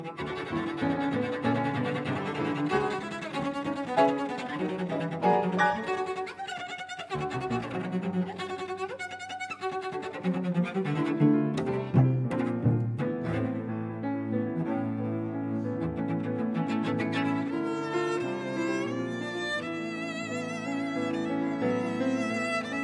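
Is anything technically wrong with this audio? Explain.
No, nothing technically wrong can be heard in this audio, and the signal holds steady throughout with no audible defects.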